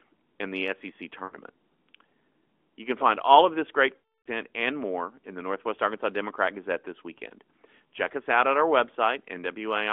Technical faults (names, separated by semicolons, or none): lost AMR speech frames